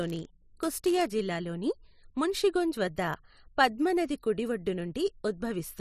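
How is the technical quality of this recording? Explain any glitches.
The speech carries one fault, confined to the opening of the clip. From 0.0 to 1.12 s there is a block size mismatch (padded). An upstream stage hands over blocks slightly shorter than the downstream stage expects, and each missing tail is filled with zeros. Those brief silent gaps recur about 99.6 times per second, producing a buzz near 100 Hz over the speech. The stretching makes this stretch play at 0.996 times normal speed.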